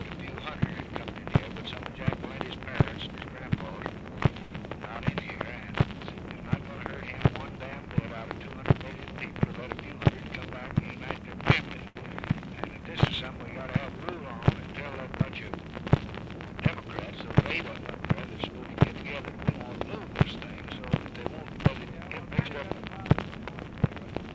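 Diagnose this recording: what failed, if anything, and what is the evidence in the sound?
The failure is in the network and jitter-buffer stage of the call path, where two short stalls from late packets can be heard. At 4.42 to 4.53 s and again at 11.88 to 11.97 s the sound is held unnaturally long, with a faint buzz or dip. A packet arrived late and the buffer ran dry, so the receiver stretched the last audio for 87 ms and then 80 ms until data arrived. It resumed from the same point, so nothing is lost, but the latency grows by those amounts.

The same buffer then performs a jitter buffer speed-up to cut that added latency. From 9.48 to 10.17 s the sound runs hurried at about 114% speed with unchanged pitch, and from 18.77 to 19.30 s at about 112%. The receiver drops short pitch-period-length slices over and over, about a tenth of a second in the first stretch and around 70 ms in the second. 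Those slices are gone, so the audio is compressed in time. The band limit at 8 kHz fits a wideband call codec.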